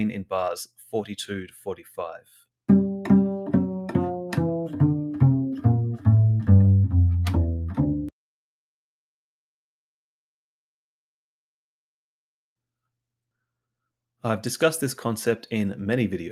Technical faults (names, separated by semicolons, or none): sound cut by the noise suppressor